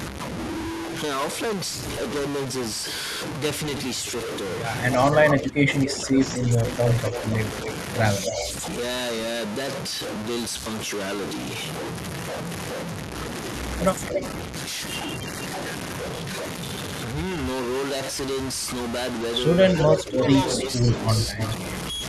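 From start to finish the audio carries distortion, and the pauses are not silent but filled with a gritty noise floor. The likely cause is a stuck bit: one bit of each sample held permanently at 0 or 1. Roughly half the sample values are pushed off by that bit's weight in a pattern that follows the waveform, and quiet passages, where the signal keeps crossing zero, turn into steady noise.

From 5.3 to 7.69 s an echo leak appears: a delayed copy of the speech about 269 ms late, sitting about 10 dB below the direct voice. It likely comes from a loudspeaker at the far end whose echo canceller let part of the microphone pickup through. Overlapping it, from 5.34 to 7.17 s, is speech suppressed in double talk. The voice dips by as much as about 10 dB, in pieces adding up to roughly a second, likely as the canceller turns down the near talker along with the echo while both sides are active. The pattern repeats briefly from 8.24 to 8.48 s, with echo at 273 ms and a dip of about 5 dB between 8.28 and 8.43 s.

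A short dip of about 5 dB comes at 14.12 to 14.22 s. From 19.73 to 21.41 s the voice is pulled down again by up to about 10 dB, over roughly 0.7 s in total. Overlapping that stretch the echo returns at 19.76 to 20.03 s, about 295 ms late and about as loud as the speech itself, and again at 20.56 to 21.52 s, about 298 ms late and about 15 dB down.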